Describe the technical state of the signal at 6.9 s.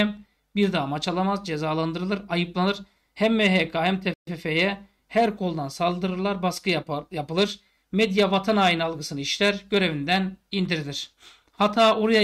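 Around 6.9 s the signal is intact, with no dropout, distortion, glitch or other fault to be heard at that moment.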